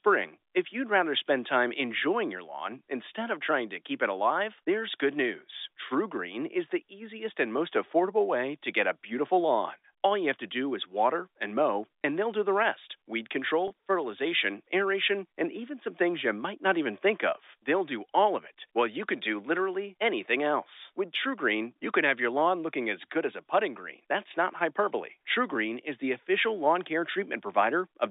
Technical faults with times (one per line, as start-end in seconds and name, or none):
12.03 packet loss with pitch repetition
13.68-13.70 packet loss with pitch repetition